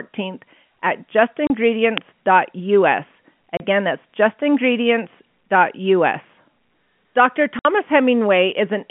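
Telephone-band speech, carried by G.711 coding with nothing above about 3.4 kHz, is cut by packet loss filled with silence at 1.47 s and 3.57 s (30 ms each) and at 7.59 s (60 ms, which fits two consecutive packets going missing). The holes start and stop abruptly. Their lengths are whole multiples of one 30 ms packet, which sets them apart from fades or random dropouts. At 1.98 s an uninitialised buffer produces a loud crack about 1.5 ms long, which fits a 64-sample block played from memory before any audio was written into it. Unlike the packet-loss holes, which come from sound being removed, this crack adds harsh energy that does not belong to the speech.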